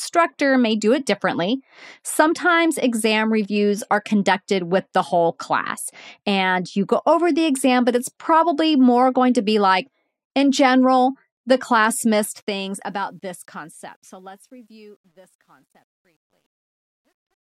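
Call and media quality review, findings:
Truncation distortion on the fade-out, 12.01 to 17.54 s. The fade turns gritty and steppy from around 12 s, worst from 14.4 s to the end. Probable component: the gain/fade stage, requantising without dither, which fits an 11-bit path. Low-level samples collapse into a few square steps.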